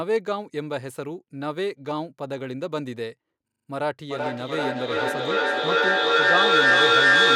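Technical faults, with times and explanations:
3.48–3.68 s, system hang loop: one 40 ms slice repeats five times, a 25 Hz buzzing stutter; the waveform shows identical blocks, and the spectrogram shows evenly spaced vertical stripes.
4.1 s to end, feedback echo between two devices: sound returns roughly every 0.4 s and builds to about 10 dB above the speech, so the spectrogram fills with thinning, ringing stacked copies.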